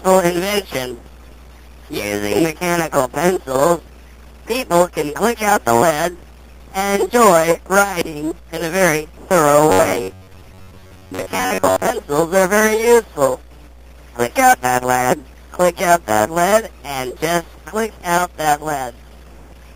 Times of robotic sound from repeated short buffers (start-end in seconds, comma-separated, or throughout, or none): 9.70-11.90